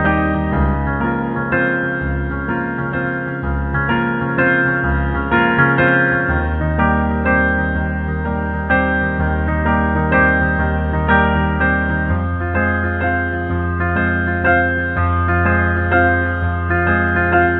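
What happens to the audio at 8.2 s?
Nothing goes wrong at 8.2 s; the audio carries on intact through that moment with no dropout, glitch or other fault.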